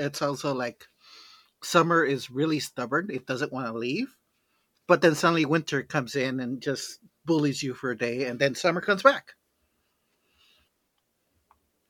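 No technical faults can be heard anywhere in this speech recording. Nothing in it points to a problem along the path from capture to playback.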